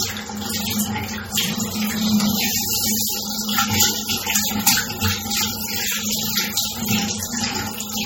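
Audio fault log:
Throughout, MP3 compression: plainly audible damage, with nothing above 16.6 kHz and a watery, swirling texture as weak frequency lines drop in and out between frames, likely from a bitrate around 32 kbps. Unlike a low-pass filter, it warbles and smears attacks.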